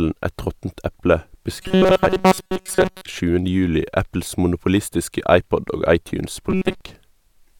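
Right after "råttent eple", from 1.56 to 3.05 s, and again from 6.50 to 6.81 s, the speech goes to a robotic sound from repeated short buffers: a stiff metallic buzz pinned at 188 Hz. Most of the audio is likely being replaced by loops of a roughly 5 ms chunk.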